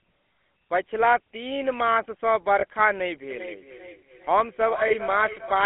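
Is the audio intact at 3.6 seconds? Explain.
No. At 3.6 seconds the sound carries a GSM full-rate codec coloring: a buzzy, gravelly roughness from the coarse pulse-driven excitation, which fits a 13 kbps GSM stream. A spectrogram shows a band of roughly 250 Hz to 3.4 kHz with nothing above, and smeared, grainy harmonics.

That moment also falls inside a feedback echo between two devices, running from 3.31 s to the end. A second device replays the call into a nearby microphone, so the sound returns about every 0.4 s, thinner and ringing, peaking at about 12 dB below the speech. The waveform shows fainter delayed copies trailing each burst.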